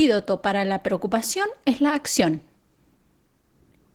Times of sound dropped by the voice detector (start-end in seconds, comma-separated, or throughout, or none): none